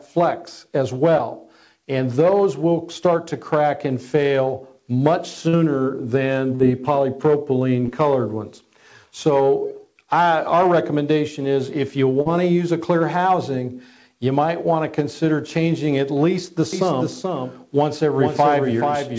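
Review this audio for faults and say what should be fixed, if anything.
Short concealed packet loss: packets arrived too late at 1.18, 5.49 to 5.55, 6.55 to 6.62, 7.86 to 7.89 and 12.21 to 12.27 s, leaving gaps of 20 to 40 ms that the receiver filled by extending the preceding sound. Each gap is heard as a brief smear or wobble. A larger jitter buffer or a more stable network link would prevent this.

Doubled audio track: from 16.73 s to the end, a second full-band copy trails the original by roughly 0.4 s at about 5 dB quieter. It is likely captured again by a slower path, and its abrupt start and dry echo give it away. Removing the duplicate route or the overlapping edit would prevent this.

Through the call path the audio has no content above 8 kHz, which fits a 64 kbps G.722 wideband codec.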